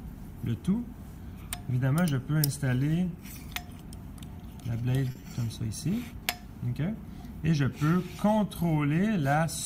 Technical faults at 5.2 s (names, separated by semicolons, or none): short stall from a late packet; short concealed packet loss